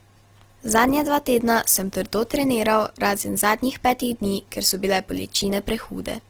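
Opus compression damage runs throughout this speech clip: the sound is grainy, rough and noisy rather than swirly, with the full bandwidth kept. This is likely the music mode of Opus, which fills starved bands with folded or noise content, consistent with a low bitrate around 16 kbps.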